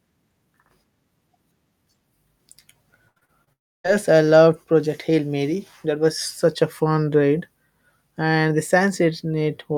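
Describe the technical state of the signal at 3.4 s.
At 3.4 s the speech sounds choppy, with small pieces dropping out. This is repeated packet loss (robotic sound), running from 3.07 to 3.49 s. Four gaps hit the stream in quick succession, the longest 83 ms. Each hole is papered over by stretching the last received sound forward, so about 42% of that span is synthetic fill rather than real signal, which gives the choppy texture.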